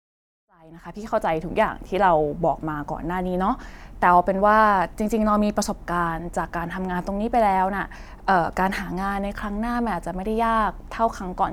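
No technical faults are audible.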